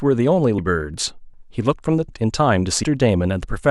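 At 0.58, 1.33, 2.08 and 2.83 s the speech jumps ahead, with about a third of a second missing at each point. This is likely audio missing between chunks, lost as one-second blocks were handed over. Each join shows as an abrupt waveform discontinuity and a thin vertical line on the spectrogram.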